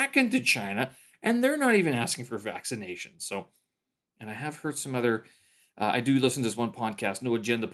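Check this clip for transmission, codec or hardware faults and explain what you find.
No transmission, codec or hardware faults are audible in the speech, which passes through the call path as expected, with the top end rolling off around 12 kHz as a call codec at that bandwidth would leave it.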